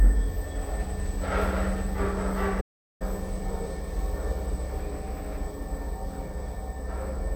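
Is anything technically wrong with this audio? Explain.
Yes. There is a playback stall from 2.60 s to 3.02 s: the sound stops partway through and the output is silent for about 0.4 s before it continues. The likely cause is the player running out of buffered data, or its playback thread being blocked, so nothing reaches the output until it recovers. It sounds like an abrupt dropout in the middle of the audio rather than a natural pause.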